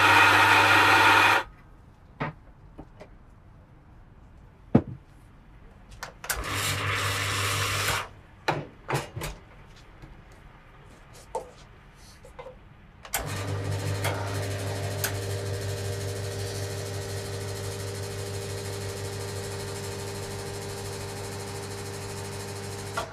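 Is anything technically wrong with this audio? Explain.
Yes. From 0.65 s to 23.06 s, regular clicks recur every 0.62 s, about 40 in all. These are clock drift buffer slips, likely from two devices running on clocks that disagree by roughly 500 ppm. At each slip the buffer drops or repeats a tiny block of samples, roughly 15 each. Unlike random dropouts, the clicks keep a strict metronomic spacing.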